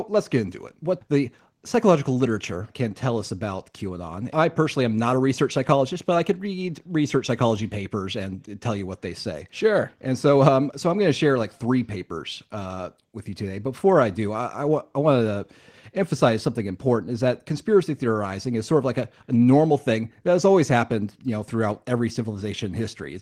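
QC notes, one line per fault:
No faults were found in this speech clip. Nothing heard in it calls for a QC note.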